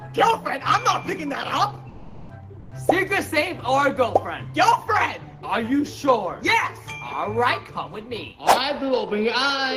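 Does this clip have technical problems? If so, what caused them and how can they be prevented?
Yes. Comfort noise in place of the background appears at 1.93–2.29 s (360 ms) and 2.59–2.71 s (120 ms). In both gaps the natural background is replaced by a smooth, detail-free hiss: about 5 dB quieter in the first and about 1 dB louder in the second. This is likely discontinuous transmission, consistent with Opus DTX, where the encoder goes quiet during low-level passages and the decoder synthesises shaped noise. Disabling DTX on the sending encoder prevents it.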